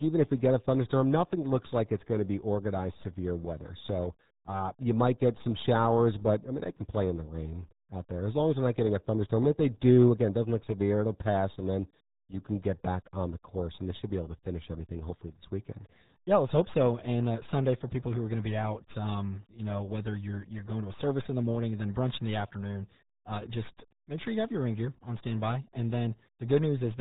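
From start to finish the speech carries the damage of the RealAudio 14.4 codec, RealAudio 1, and the coding here is heavy. Nothing above 3.8 kHz survives, so consonants lose their edge and the voice turns muffled, with a gargling, bubbly texture that fits an 8 kbit/s speech codec built for dial-up modems. A plain telephone-band filter would sound narrow but clean; here the voice itself is smeared and gargly.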